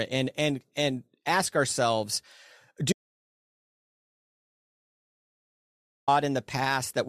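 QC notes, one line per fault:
2.93–6.08 s, audio dropout to silence: the input was likely lost through a disconnected device, failed link or mute while the recorder kept writing silence. The speech cuts off abruptly, leaving 3.15 s of total silence with no room tone, then resumes mid-flow. The speech from that gap is gone.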